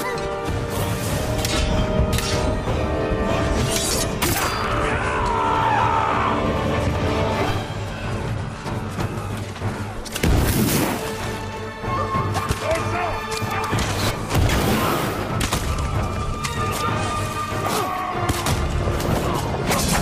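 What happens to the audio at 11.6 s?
Nothing goes wrong at 11.6 s; the audio plays through that moment intact, with no dropout, click or other fault.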